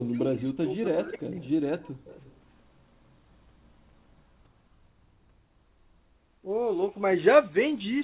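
From the start to 1.41 s the speech dips and drops out in pieces, most likely speech suppressed in double talk: with both ends talking at once, the echo canceller apparently could not tell this talker from its loudspeaker echo and turned everything down. The level falls by as much as about 40 dB, over roughly a second and a half in total. On a waveform the envelope collapses into narrow gaps. A spectrogram shows dark vertical bands where the energy vanishes across the band, which here ends at 4 kHz, as fits a narrowband telephone codec.

Right after that, at 1.42 to 1.5 s and again from 2.04 to 2.41 s, a faint, delayed copy of the speech comes through, most likely an echo leak: one side's echo canceller failed to remove all of what its microphone picked up from its loudspeaker, so the residue was sent back. The copy trails by 283 ms, at about 30 dB and then about 25 dB below the speech. 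On a spectrogram it appears as weak, smeared repeats of the earlier harmonic pattern, shifted 283 ms later in time.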